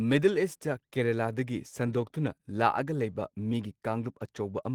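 Throughout the speech, there is clock drift between sender and receiver: the sending side's clock runs roughly 2% slow against the receiver's, so audio arrives a little more slowly than it is played out. The jitter buffer keeps draining, and the receiver must stretch the audio to avoid running dry. On a spectrogram, syllable spacing is very slightly wider than natural, with no single obvious break.

From 0.57 s to 4.43 s, the stretching shows up as repeated timing corrections. The receiver repeats short slices of audio, all in the same direction, to fill the gap left by the slow sender. Together these add about a tenth of a second, so the passage plays at about 98% speed. They sound like faint stutters or a slightly dragging, uneven tempo. In the waveform, small duplicated cycles or brief repeated segments appear at irregular spacing. On a spectrogram, there are tiny vertical seams where a frame is reused.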